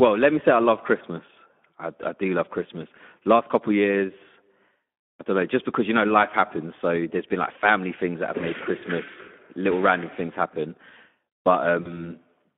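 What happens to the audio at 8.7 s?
At 8.7 s the speech carries Speex codec damage, present across the whole clip rather than at that instant alone. The CELP coder has too few bits to model the excitation finely, so the voice comes out hoarse and noisy, with plainly audible damage that fits a low bitrate of around 11 kbps. The band is confined to roughly 200 Hz to 3.5 kHz, leaving the sound thin and telephone-like.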